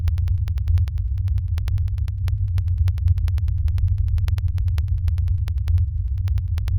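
Periodic USB or driver dropouts from 0.08 to 6.68 s: the driver stalls every 0.1 s, leaving tiny silent gaps, heard as steady ticks through the sound.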